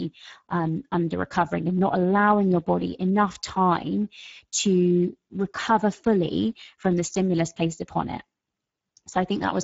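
It's a speech clip with Speex codec damage running the whole way through, and it's plainly audible. The voice has that grainy, hoarse CELP quality because the encoder has very few bits to describe the excitation signal, so the fine detail gets replaced by a rough approximation. The sound points to a low setting of roughly 10 kbps, and nothing comes through above 7.6 kHz, which fits Speex's wideband mode.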